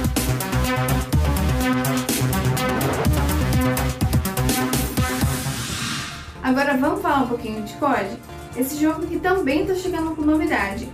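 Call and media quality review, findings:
No audible faults found in this recording.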